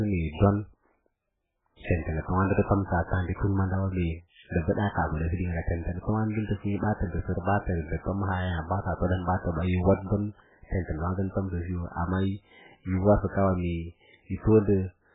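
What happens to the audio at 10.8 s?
At 10.8 s the speech sounds watery and swirly with dull, muffled treble, as it does throughout; likely heavy MP3 compression at a very low bitrate, cutting everything above 3.8 kHz.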